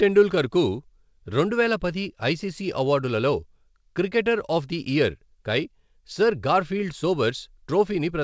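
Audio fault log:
No faults detected; the speech comes through a call path with a G.722-type codec at 64 kbps, so nothing sits above 8 kHz.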